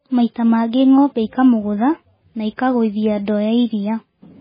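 Throughout the speech, the treble stops dead at 5 kHz and the sound turns watery and swirly, with smeared onsets: likely MP3 compression at a very low bitrate, pointing to around 16 kbps. A spectrogram shows a flat ceiling at 5 kHz and flickering holes below it.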